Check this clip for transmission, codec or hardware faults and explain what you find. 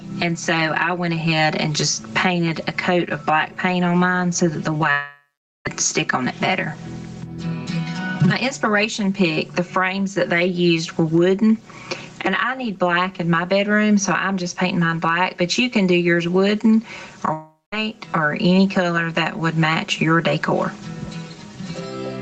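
Four faults are audible: a constant comb filter, constant gain pumping, one short concealed packet loss and two longer dropouts. Nothing is heard above 8 kHz, which matches the bandwidth of the call path.

Channel delay (comb filtering) runs through the whole clip. One channel trails the other by roughly 5 ms, and when they are summed to mono, energy common to both cancels at evenly spaced frequencies, starting around 100 Hz. The result is a hollow, phasey tone. Because the notches never move, this differs from flanging or phasing effects, whose notches sweep, and from room reverberation, which adds a tail instead of a fixed coloration.

Gain pumping is also present throughout. The gain swings over a range of around 20 dB, ducking under each loud passage, so loud and soft parts sit unnaturally close in level. The likely cause is input gain set far too high, with a fast limiter or compressor clamping down on each peak.

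A short concealed packet loss occurs at 4.77 to 4.81 s, where about 20 ms of audio never arrived in time. The decoder bridged the gap by extending the preceding sound and then crossfading back into the real signal. The result is a brief smear or wobble lasting a few hundredths of a second. It is too short and too seamless to be a dropout, and unlike a click from a damaged file, it carries the character of the surrounding sound.

Long network dropouts occur at 4.91 to 5.67 s and at 17.33 to 17.74 s. In each, the last sound is stretched into a fading buzz or hiss, then gives way to silence, about 0.46 s in the first case and about 0.21 s in the second. The audio then resumes with the missing portion simply gone. These are likely network outages that the receiver's concealment could cover only briefly. The fade to silence and the skipped material distinguish them from the short loss just before 4.9 s.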